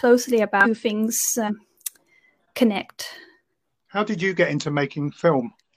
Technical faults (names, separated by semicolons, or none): damaged data in a compressed stream